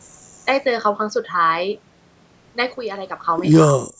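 At 2.77 s the level of the speech drops abruptly by about 6 dB and stays there until 3.25 s, where it returns just as abruptly. This is a sudden gain jump: the background noise floor falls and recovers in step with the voice, and each change happens from one sample to the next with no fade. The likely cause is a digital gain setting applied and then removed without a ramp.

From 3.70 to 3.84 s the speech dips sharply, falling by something like 15 dB at its deepest point, with the disturbance lasting roughly 150 ms. This is speech suppressed in double talk. The likely cause is an echo canceller that could not tell the near talker apart from loudspeaker echo while the far side was also active, so it attenuated both. The result is a brief dip in the voice. The band limit at 8 kHz reflects normal call microphone processing.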